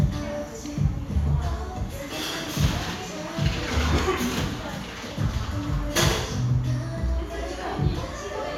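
Everyday sounds, with no technical fault heard anywhere.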